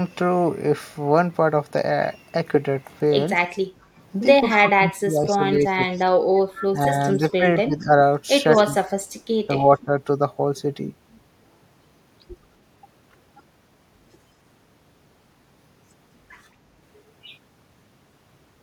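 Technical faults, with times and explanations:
3.71–3.96 s, background gated by the echo canceller: the room sound dips by about 13 dB for roughly a third of a second, then returns. The echo canceller pulled the microphone down while far-end audio played from the loudspeaker, taking the ambience with it.
4.50–4.56 s, 5.54–5.96 s, 6.58–7.61 s, 8.53–8.57 s, echo leak: a faint delayed copy of the sound trails the original by 215 ms, sitting somewhere around 15 to 25 dB below it. Likely residual loudspeaker pickup that the far end's echo canceller failed to remove and sent back.
4.60–6.01 s, 6.70–7.95 s, 8.61–9.91 s, speech suppressed in double talk: the talker's level sinks and breaks up in patches, dropping by roughly 15 to 30 dB, while the other side is speaking. The likely cause is the echo canceller confusing local speech with echo and attenuating both.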